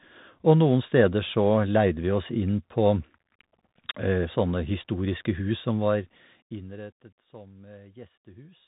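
From start to finish the speech carries the sound of a Bluetooth CVSD headset codec. Nothing passes above about 3.8 kHz, and the coder tracks the waveform one up-or-down bit at a time, which fits a 64 kbit/s link. Where loud high content outruns its adapting step, the sound distorts and s sounds turn scratchy, over a steady granular hiss. That grain sets it apart from a plain telephone-band filter, which dulls without roughening.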